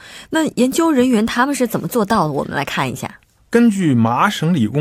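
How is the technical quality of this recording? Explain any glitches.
One clear glitch affects the speech, a drift correction step between 1.18 and 3.16 s. For about two seconds the audio runs roughly 6.4% fast. Pitch rises by about 107 cents, just over a semitone. Then both snap back to normal at once. The cause is likely clock-matching software changing the playback rate in one step to drain or refill its buffer. Because speed and pitch move together, the voice sounds briefly hurried and sharp.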